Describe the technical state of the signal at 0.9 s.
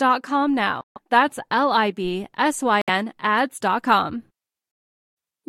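At 0.9 s the speech is cut by silence from 0.81 to 0.98 s, likely a Bluetooth dropout: late packets were discarded, muting the output. The waveform flatlines and the spectrogram shows a blank vertical band; speech resumes as if it had kept playing.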